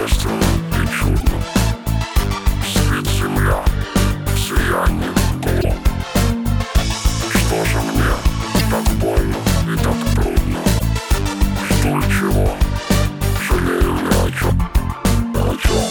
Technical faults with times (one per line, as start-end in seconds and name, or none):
1.19-1.23 broken MP3 bit reservoir
5.60-5.65 broken MP3 bit reservoir
8.58-8.61 broken MP3 bit reservoir
10.78-10.82 broken MP3 bit reservoir
14.49-14.52 broken MP3 bit reservoir